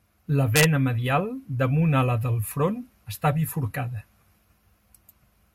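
Integer overflow at 0.56 to 0.64 s: the speech level, pushed about 1 dB past the largest representable value, wrapped around to the opposite sign instead of being held at the limit, so each overshooting peak jumps across the full range and cracks far more harshly than clipping would.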